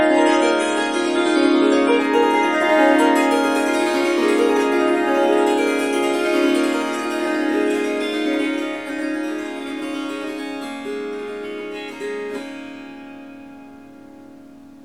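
Everyday sound that opens dull and smeared, with nothing above about 10.4 kHz and heavier codec artefacts, then brightens abruptly at 2.0 s without a gap. This is an adaptive stream starting at a low bitrate, which fits a 32 kbit/s MP3 start before the player switched to roughly 128 kbit/s.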